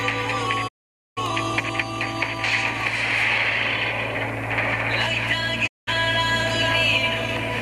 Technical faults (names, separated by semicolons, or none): digital broadcast dropout